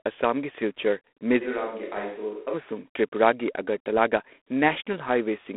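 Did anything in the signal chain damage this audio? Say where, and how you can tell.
Yes. The first fault is in the codec stage, and it lasts the whole clip. This is G.726 ADPCM at 24 kbit/s. The speech carries a harsh, rasping hiss that rises and falls with its level. The band runs from about 250 Hz to 3.5 kHz, and nothing passes above 3.8 kHz. The codec sends only a few bits per sample, coding the error from an adaptive prediction. That coarse step leaves quantisation noise that tracks the speech.

The second fault is at capture, from 1.43 to 2.52 s. There is a switch to a distant microphone. The sound turns suddenly roomy and hollow and loses bass. The level drops by about 10 dB. Background room noise comes up to roughly 35 dB below the speech. Both changes are abrupt, in and out. The likely cause is that the close microphone's signal failed, so the recording fell back on a microphone further away.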